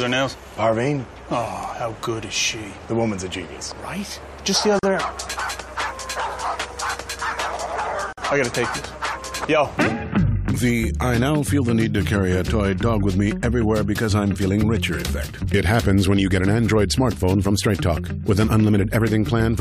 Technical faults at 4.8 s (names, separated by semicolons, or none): gap at a join of encoded pieces